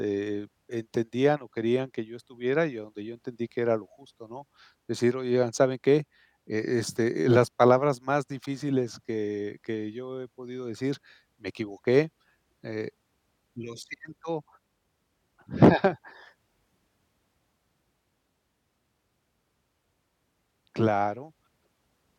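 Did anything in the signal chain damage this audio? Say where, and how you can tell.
No, nothing stood out on listening that points to damage at any stage of the signal chain.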